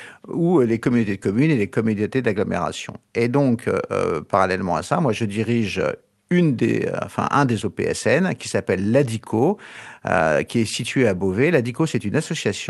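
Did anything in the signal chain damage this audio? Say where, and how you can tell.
No, nothing in the chain damaged this speech.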